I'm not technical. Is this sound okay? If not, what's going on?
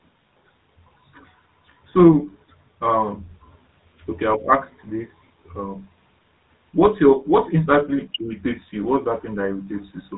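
No. All through the clip the speech sounds buzzy, gravelly and muffled, like an old mobile phone call. That is the GSM full-rate codec: it rebuilds the voice from a rough model driven by coarse pulses, and discards everything above 4 kHz.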